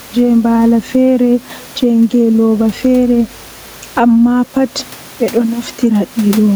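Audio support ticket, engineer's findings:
Gain pumping, throughout. Level swinging around 10 dB; speech sounds squashed, loud and soft parts pressed together. Likely cause: mic preamp gain set far too high, fast limiter/compressor clamping on each peak and releasing in gaps. Room noise itself sits about 33 dB below speech, a property of the recording space.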